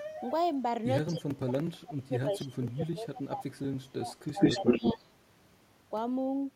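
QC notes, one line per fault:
1.1–4.15 s, speech suppressed in double talk: the speech dips over roughly 3 s, at worst by about 30 dB. This is likely an echo canceller that could not separate local talk from far-end echo and attenuated both.
4.27–4.93 s, echo leak: a delayed copy of the speech trails the original by 162 ms, about 10 dB below it. The pattern points to a loudspeaker echo the canceller did not fully remove, likely returned to the listener.
4.32–5.05 s, speech suppressed in double talk: overlapping the leak, the speech is pulled down again, up to about 20 dB, for under half a second in total. Gain is likely being cut on both paths while the echo and live speech coincide.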